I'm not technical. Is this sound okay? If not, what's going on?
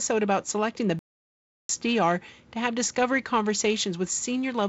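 No. At 0.99 s the speech cuts to silence for about 0.7 seconds, resuming at 1.69 s: a playback stall, likely the player running short of data.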